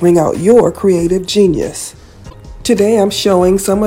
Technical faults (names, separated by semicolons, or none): hard clipping; damaged data in a compressed stream